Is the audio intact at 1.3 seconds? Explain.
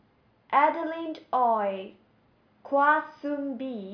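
Yes, the audio is intact at 1.3 seconds, with no fault audible at that point in the speech.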